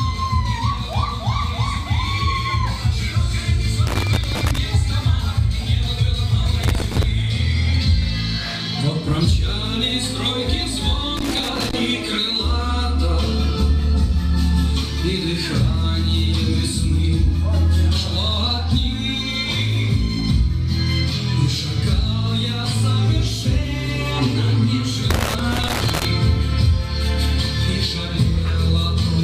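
A worn or dirty contact somewhere in the signal chain keeps making and breaking as it shifts, chopping the audio. This loose connector crackle comes in four irregular bursts of scratchy crackle: from 3.87 to 4.58 s, from 6.63 to 7.04 s, from 11.17 to 11.81 s, and a longer stretch from 25.10 to 26.05 s. In each burst the sound breaks up into rough, uneven fragments.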